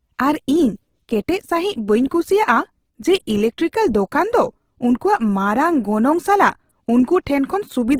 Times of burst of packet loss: none

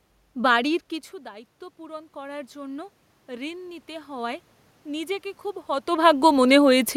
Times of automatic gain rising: 1.76-6.49

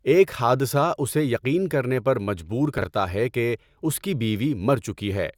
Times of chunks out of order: 2.78-2.84

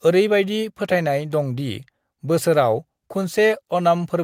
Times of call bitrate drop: 2.65-3.87

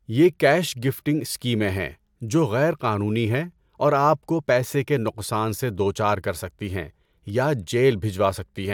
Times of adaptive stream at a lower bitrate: none

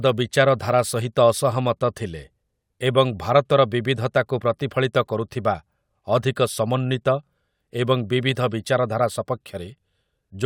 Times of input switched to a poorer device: none

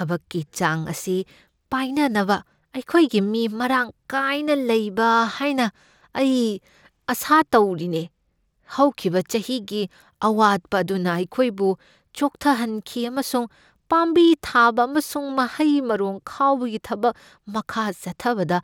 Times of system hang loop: none

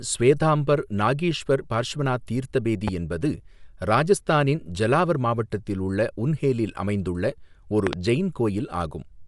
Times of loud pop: 2.88-2.90, 7.87-7.96

